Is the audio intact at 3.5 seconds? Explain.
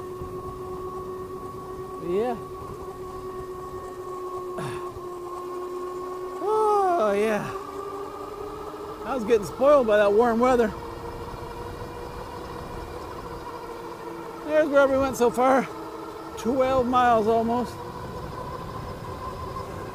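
No. At 3.5 seconds, as throughout, there is low bit depth without dither: likely rounding to 8 bits, leaving grainy distortion about 35 dB down that tracks the signal.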